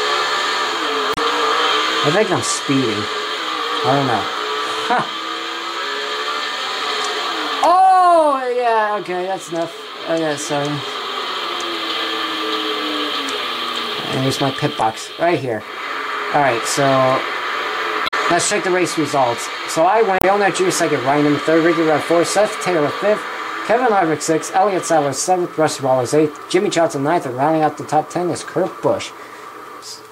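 Four short bursts of damaged data in a compressed stream occur: at 1.11 to 1.18 s, 14.78 to 14.83 s, 18.04 to 18.14 s, and 20.18 to 20.24 s. Each lasts 50 to 100 ms. In each, the compressed data held wrong bytes. The decoder misread those frames, lost sync, and had to search for the next valid frame header. The result is a brief chirp, squawk, click or short hole that breaks into the sound.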